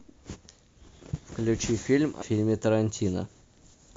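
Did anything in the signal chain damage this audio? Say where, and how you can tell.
Yes. At the codec or decoding stage, whole compressed frames were skipped at 2.21 s, and the speech jumps forward by roughly a tenth of a second. That fits about four frames of around 26 ms each. Overlapping neighbouring frames smear the join into a brief blip, not a click.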